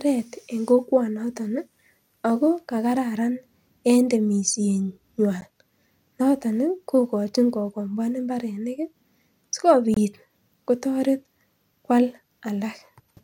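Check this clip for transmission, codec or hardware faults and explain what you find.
The speech has two brief dropouts, both a gap at a join of encoded pieces. The first falls at 5.41 s and lasts about 11.5 ms. The second runs from 9.94 to 9.97 s, about 24 ms. The audio was encoded in separate sections and spliced without trimming. Encoder start-up delay and last-frame padding stayed in. Each join leaves a tiny hole of silence. Its edges are smeared by the codec. The speech then resumes exactly where it stopped.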